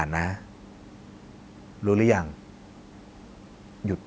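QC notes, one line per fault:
Nothing stood out on listening to this speech clip, with the room's background sitting about 35 dB below the speech and the call microphone processing leaving nothing above 8 kHz, as expected.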